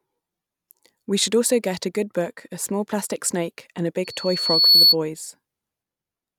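From 4.04 to 4.96 s a loudspeaker feedback squeal rises at 4.4 kHz. The microphone picks up its own loudspeaker, and at that pitch the loop gain exceeds one. Unlike a steady interfering whistle, it swells over most of a second, finishing around 10 dB above the speech.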